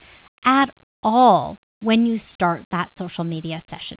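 No technical faults are present.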